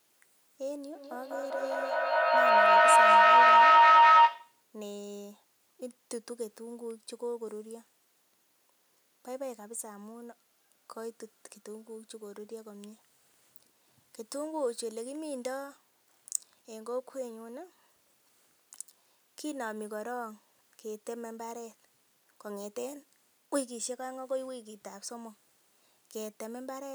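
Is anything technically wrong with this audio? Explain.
Yes. Feedback howl runs from 0.95 to 4.65 s: a second device in the same room picks up the call's loudspeaker output and sends it back, each trip louder, so a tone around 1 kHz swells to about 18 dB above the speech, pulsing roughly every fifth of a second.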